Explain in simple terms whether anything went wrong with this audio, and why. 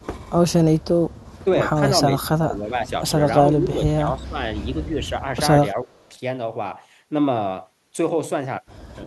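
Echo leak: a very faint, delayed copy of the speech, about a third of a second late, can be heard at 0.80–0.84 s, 1.14–1.39 s and 5.99–6.09 s. It likely comes from a loudspeaker whose echo canceller let some sound through.

Speech suppressed in double talk: the speech briefly dips in level at 2.21–2.28 s, 2.46–2.92 s, 3.50–3.83 s, 4.16–4.44 s and 5.73–5.99 s. Likely cause: with both sides talking at once, the echo canceller turned down the talker along with the echo.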